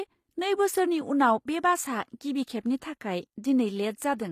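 From start to finish the speech carries plainly audible codec damage, and the treble has a synthetic, gritty edge: s sounds come out metallic and lispy, and nothing is present above about 14.9 kHz. This is likely HE-AAC compression at a low rate, consistent with roughly 24 kbps. Only the lower band is truly coded, and the top is rebuilt by copying lower bands upward. Unlike a plain low-pass codec, which would sound dull, this treble stays bright but mismatched.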